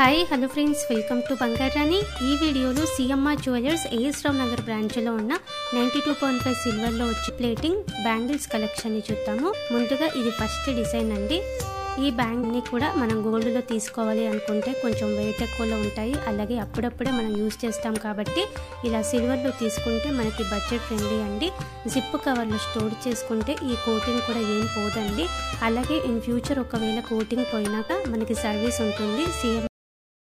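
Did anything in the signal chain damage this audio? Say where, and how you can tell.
Yes. In the codec stage, compressed frames were skipped at 7.28, 9.52, 12.42 and 27.89 s. The sound jumps ahead by roughly 0.7, 0.2, 0.3 and 0.2 s, with a brief smeared blip at each join.

At the storage or playback stage, the final buffers were never written, leaving a cut-off end. At 29.67 s the sound stops mid-event and drops straight into digital silence with no decay.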